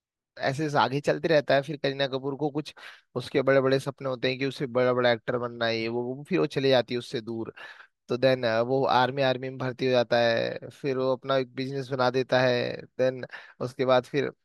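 No technical faults can be heard anywhere in this recording.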